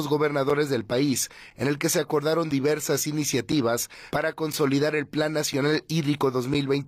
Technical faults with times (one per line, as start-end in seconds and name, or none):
0.50 gap between chunks
1.50 gap between chunks
2.51 gap between chunks
3.52 gap between chunks
4.53 gap between chunks
5.53 gap between chunks